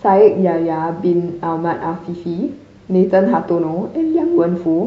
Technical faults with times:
1.41-4.87 adaptive stream at a lower bitrate

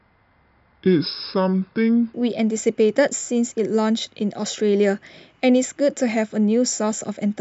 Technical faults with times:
0.00-2.14 section at the wrong speed

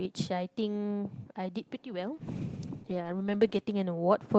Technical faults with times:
2.16-3.69 call bitrate drop

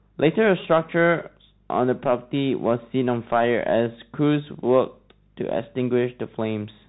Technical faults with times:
0.00-6.88 Bluetooth CVSD headset codec

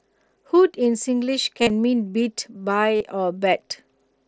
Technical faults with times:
1.62-1.70 concealed Bluetooth headset packet loss
2.96-3.01 concealed Bluetooth headset packet loss

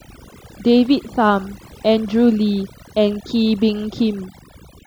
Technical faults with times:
0.00-4.87 overdone noise removal

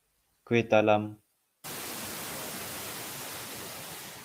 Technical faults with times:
0.00-4.24 noise suppressor artifacts

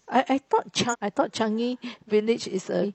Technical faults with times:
0.89-0.95 damaged data in a compressed stream
2.79-2.86 damaged data in a compressed stream

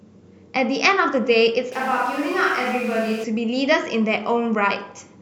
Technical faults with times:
1.72-3.24 switch to a distant microphone

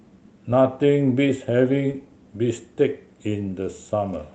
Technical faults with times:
1.91-1.96 short concealed packet loss

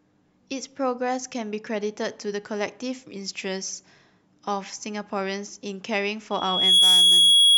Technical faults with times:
6.31-7.58 loudspeaker feedback squeal

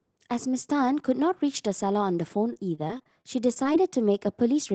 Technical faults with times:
2.53-3.76 repeated packet loss (robotic sound)

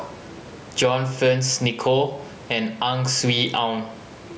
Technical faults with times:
0.00-4.38 gain pumping

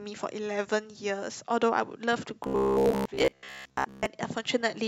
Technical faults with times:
2.44-4.06 robotic sound from repeated short buffers

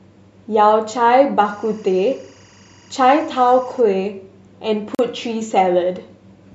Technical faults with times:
1.45-3.81 timecode bleed
4.95-4.99 gap between stream segments

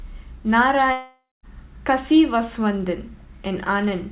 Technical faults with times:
0.92-1.46 long network dropout

